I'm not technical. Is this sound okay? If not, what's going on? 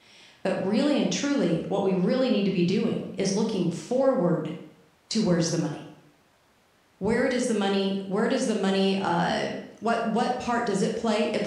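Yes, nothing in this recording points to a technical problem with the sound.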